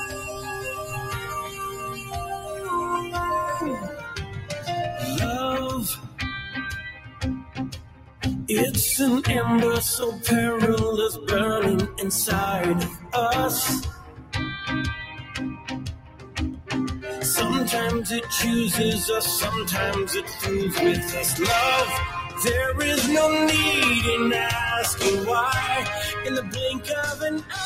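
A noise suppressor built for speech has been left running on this audio for the whole clip. It treats sustained tones, ambience and decay tails as noise and keeps pulling them down, with the gain swinging by roughly 15 dB as it opens and closes. Sharp onsets slip through while what follows sinks, so the sound pumps and thins out instead of holding a steady level.

You can hear the sound cut by the noise suppressor in eight specific places. From 0.0 to 2.69 s it's pressed down by up to about 10 dB for most of that stretch. Then 3.81 to 4.68 s loses about 11 dB, and 5.95 to 8.23 s drops by about 13 dB for roughly two seconds. Shorter dips come at 12.88 to 13.13 s (about 11 dB) and 13.88 to 14.34 s (about 13 dB). From 15.01 to 17.06 s it drops by about 13 dB for around a second and a half. There's a brief one at 22.22 to 22.37 s (about 9 dB), and finally 26.41 to 27.55 s, down by about 11 dB. 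In each case the held or fading part sags or gets clipped short while the attacks stay up.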